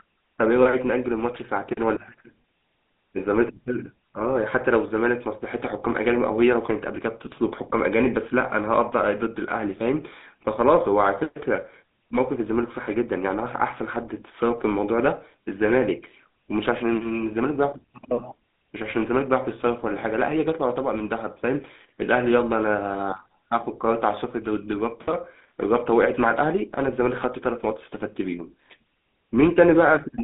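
Speech carrying GSM full-rate codec damage from start to finish, with a plainly audible buzzy, gravelly roughness, the character of a 13 kbit/s first-generation GSM link. The codec rebuilds the voice from a vocal-tract filter fed by a coarse, regularly spaced pulse excitation, so the fine detail of the voice is lost. A spectrogram shows energy confined to roughly 200 Hz to 3.6 kHz, a hard ceiling with nothing above 3.8 kHz, and smeared, grainy harmonics.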